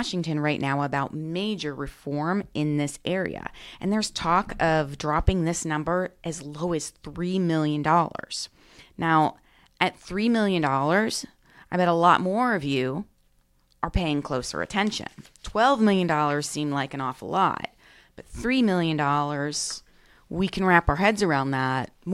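No technical faults are audible.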